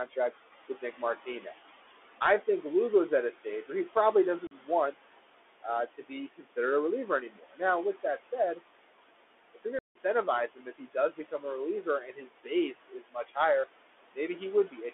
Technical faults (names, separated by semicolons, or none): noise suppressor artifacts; Bluetooth CVSD headset codec; speech cut by the noise suppressor; unconcealed Bluetooth headset packet loss